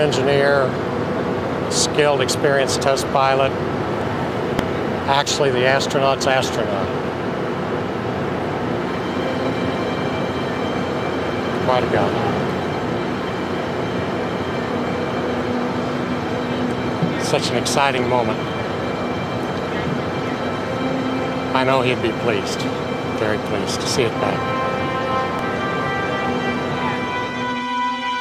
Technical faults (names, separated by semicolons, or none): damaged data in a compressed stream